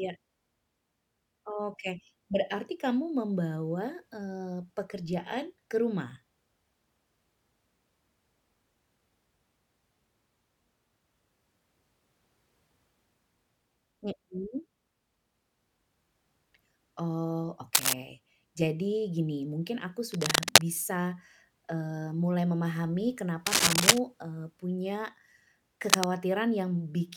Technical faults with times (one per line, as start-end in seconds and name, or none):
17.74-17.93 cable scratch noise
20.12-20.72 cable scratch noise
23.46-23.98 cable scratch noise
25.88-26.04 cable scratch noise